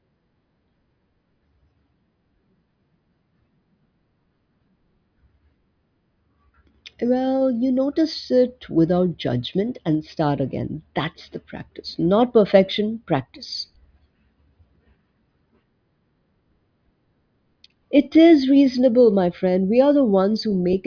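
No technical faults can be heard anywhere in the speech recording. There is nothing to place in time or describe.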